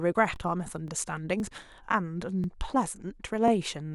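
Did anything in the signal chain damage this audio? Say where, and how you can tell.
Yes. Overlapping chunks at the buffer or chunked-processing stage cause a 20 ms stutter at 0.36, 0.88, 1.40, 1.92, 2.44, 2.96 and 3.48 s. Each 0.5 s chunk begins 20 ms early, so that slice plays twice. The waveform shows repeated cycles at each seam, and the spectrogram shows evenly spaced vertical lines.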